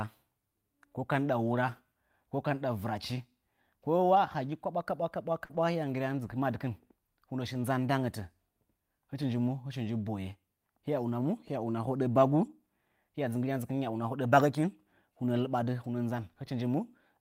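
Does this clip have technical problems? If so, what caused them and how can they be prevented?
Yes, two related kinds of network damage show up in this speech.

Lost packet rebuilt from error correction: at 4.15, 5.49–5.59, 7.53–7.55, 9.21–9.23, 11.21–11.23, 13.93–13.95 and 15.35–15.41 s (right after "bagəkin hunəa"), there's no gap, just brief rougher, noisier patches of 20 to 60 ms. The decoder played the lower-quality backup copy carried in the following packet. A steadier network or a slightly larger jitter buffer would prevent these.

Short concealed packet loss: around 5.45–5.51 s, about 40 ms never arrived, so the receiver extended the preceding sound to bridge the hole, giving a quick smear before it blends back. It runs straight into the rebuilt stretch. Fixing the underlying packet loss or adding buffer headroom stops it.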